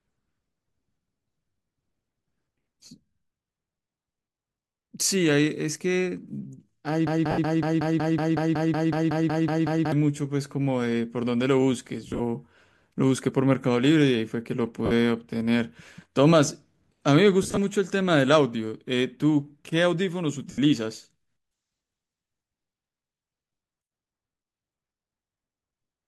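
At 7.07 s the speech catches on a fragment about 185 ms long. It repeats back to back, roughly fifteen times, until 9.92 s. This is a broken-record loop. The likely cause is a player or stream that stalled and kept sending the last piece it held. Whatever should have played in those seconds is gone.

Inside that loop, from 7.31 to 7.38 s, comes the first of five lost LE Audio frame events. The others fall at 12.08 to 12.21 s, 14.86 to 14.92 s, 17.43 to 17.58 s and 20.51 to 20.59 s. The decoder fills each gap by reusing the last spectrum with random signs. Tonal parts of the speech blur into a brief noisy smear. The gaps run 50 to 110 ms, which fits a handful of 10 ms frames going missing. At 12.08 and 17.43 s the losses come in short scattered runs rather than one block. The light lossy compression leaves at most a faint watery texture on noise and attacks.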